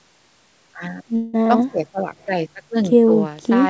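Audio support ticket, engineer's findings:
Call audio freeze, 1.16 to 1.35 s: speech stalls into a fading buzz, then resumes exactly where it stopped. Likely jitter buffer underrun from late packets; about 176 ms of fill inserted, nothing lost, unlike packet loss. Band tops out at 8 kHz, consistent with G.722.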